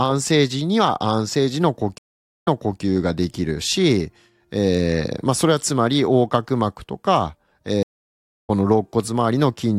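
Speech drops out twice. From 1.98 to 2.81 s there is about 0.45 s of silence, and the talk resumes 384 ms earlier, so a short stretch repeats. From 7.83 to 8.50 s a 0.62 s gap is followed by a jump ahead of roughly 0.4 s, so some speech is lost. Both are a stream reconnect: the connection dropped, playback stalled, and a fresh decoder picked up mid-stream, once from a resent earlier burst and once at the live point further on.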